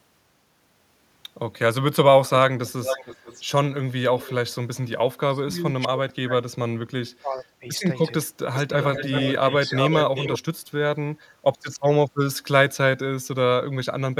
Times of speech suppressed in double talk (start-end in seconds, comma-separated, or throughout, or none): 5.26-7.67, 8.66-8.72, 9.38-10.13